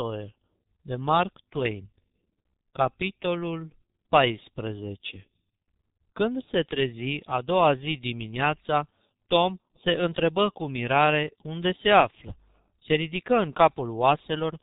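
From start to finish the speech sounds muffled and hoarse, with consonants smeared together and nothing audible above about 3.8 kHz. This is heavy G.723.1 codec damage. The codec squeezes speech into 30 ms frames and rebuilds it from a coarse vocal model that updates only slowly, so rapid sound changes blur and the top of the spectrum is simply gone. The muffled, hoarse quality fits the codec's rate of roughly 6.3 kbit/s.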